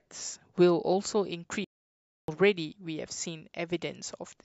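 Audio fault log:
1.64–2.28 s, playback stall: the speech halts mid-flow and the output falls completely silent for about 0.64 s before carrying on. The likely cause is the player running out of data or its thread being blocked. The silence lasts far longer than a brief dropout.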